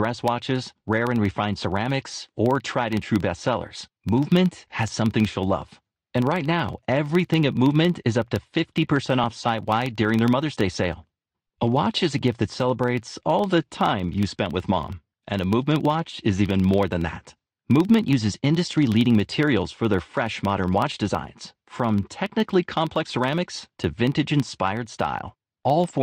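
Throughout the speech, a filter restarted on every block leaves a small transient at each block start, heard as a 21.5 Hz buzz tracking level, which fits a 2048-sample block.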